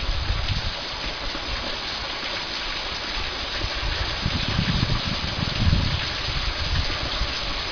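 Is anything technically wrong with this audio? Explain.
No, nothing technically wrong can be heard here.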